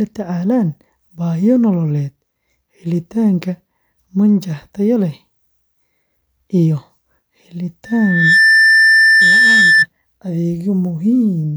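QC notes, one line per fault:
7.85–9.86 s, loudspeaker feedback squeal: the mic hears its own speaker, and a 1.8 kHz tone swells over about half a second to ride above the speech.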